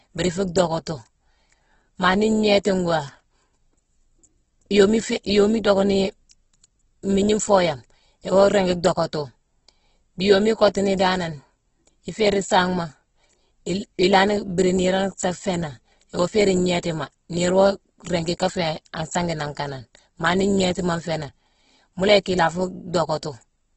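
Throughout the speech, the sound is rough and grainy rather than swirly, and nothing is present above about 8 kHz. This is most likely Opus compression running in its music (CELT) mode at a very low bitrate, which fits something near 12 kbps. When bits run short, this mode keeps each band's energy and fills in the detail by folding or with noise. The result is a rough, sandy texture instead of the warbling, hollowed-out holes that MP3 leaves.

At 16.28 s and again at 18.50 s, the speech jumps forward with no silent gap. Each is likely a dropped buffer (overrun): the hardware overwrote samples before the program read them, so roughly 10 ms of audio vanished and the two sides were spliced together. That missing gap is what separates it from a dropout that inserts silence or a glitch that repeats material.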